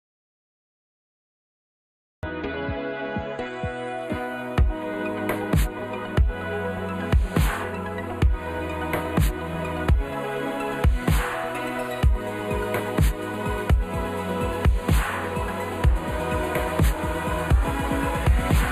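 From the start until 2.23 s there is an audio dropout to silence: plain silence with no room tone, most likely from lost input rather than a quiet passage. Throughout, channel delay (comb filtering) makes the sound hollow and phasey, with fixed notches starting around 5 kHz. That fits one channel running a few samples, roughly 0.1 ms, late before a mono sum, unlike a drifting phaser sweep. At 5.79, 7.63 and 17.64 s, compressed frames are skipped. The audio jumps ahead by about 70, 100 and 200 ms, which fits whole 24 ms frames.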